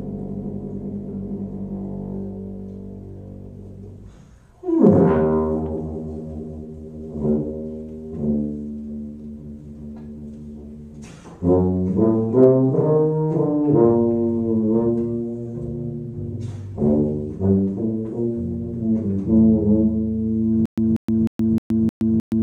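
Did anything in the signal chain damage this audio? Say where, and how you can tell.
Yes. From 20.66 s to the end, a 188 ms burst repeats six times every 309 ms with 120 ms silences: stutter with silent gaps, likely a stalled playback buffer.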